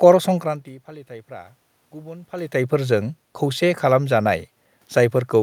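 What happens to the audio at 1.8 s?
At 1.8 s the audio is intact, with no fault in the system; the room noise under the speech is simply part of the recording.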